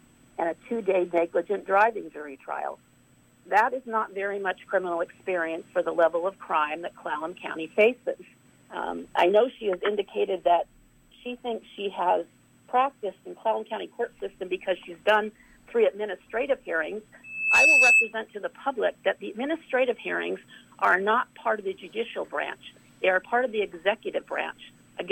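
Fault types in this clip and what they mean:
Loudspeaker feedback squeal: a piercing tone near 2.6 kHz swells within about a third of a second to roughly 10 dB above the surrounding sound, from 17.24 to 18.13 s, because a microphone picked up its own loudspeaker and the loop gain at that frequency exceeded one.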